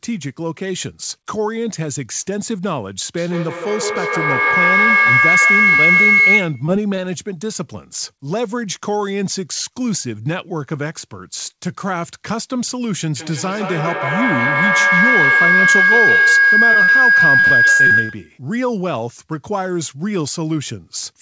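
Speech carried over a call path, with nothing above 8 kHz, which points to a wideband codec such as G.722. A feedback howl builds from 3.17 to 6.82 s and again from 13.17 to 18.41 s. Each time, the loop between a loudspeaker and a microphone in the same room gains level on every trip, so the sound narrows to a tone of around 2 kHz and then around 1.5 kHz, pulsing roughly every 0.15 s and peaking about 8 dB above the speech. Short concealed packet loss appears as brief smears at 6.66, 6.96, 16.73 and 16.83 s, each lasting 35 to 62 ms. At these points audio arrived too late for the decoder, and the receiver extended the preceding sound before blending back. From 17.40 to 18.11 s, repeated packet loss produces a choppy, robotic stretch. Six gaps, the longest 71 ms, are patched in quick succession, so about a third of that span is synthesized rather than received.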